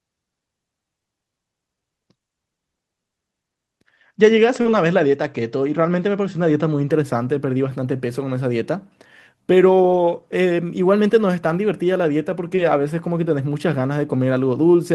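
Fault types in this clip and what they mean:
short concealed packet loss: brief smeared wobbles near 4.61 s and 12.56 s, where missing audio was bridged by extending the preceding sound, then blended back.
lost packet rebuilt from error correction: short rougher, noisier patches at 4.65–4.76 s, 7.32 s, 9.94 s and 12.58 s, decoded from low-bitrate copies in following packets.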